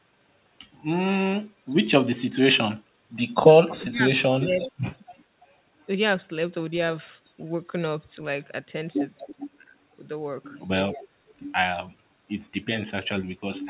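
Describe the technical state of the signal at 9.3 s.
At 9.3 s the speech carries an echo leak, running from 9.27 to 9.57 s: a faint, delayed copy of the speech trails the original by about 330 ms, sitting roughly 20 dB below it. The likely cause is a far-end loudspeaker whose echo canceller let part of its microphone pickup return. On a spectrogram, a weak ghost of the preceding harmonic pattern appears shifted right, capped at 4 kHz like the rest of the call audio; the waveform shows a low-amplitude tail.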